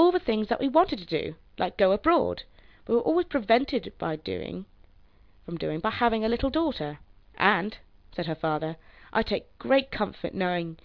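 No technical faults can be heard anywhere in the audio, and the signal holds steady throughout with no interruptions or damage.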